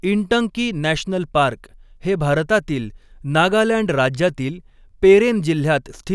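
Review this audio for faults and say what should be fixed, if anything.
No faults can be heard in this speech clip. Nothing needs to be fixed.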